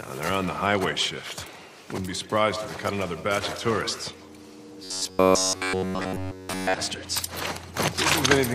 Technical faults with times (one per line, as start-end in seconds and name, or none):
4.84-6.74 robotic sound from repeated short buffers